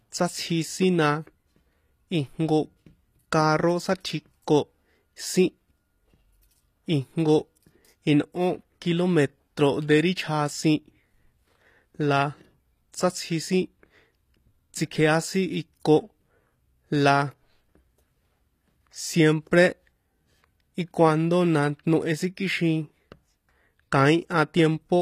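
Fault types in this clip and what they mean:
HE-AAC compression: Codec damage is plainly audible. The treble sounds copied up from lower bands, likely HE-AAC at about 24 kbps. Nothing sounds above 14.9 kHz.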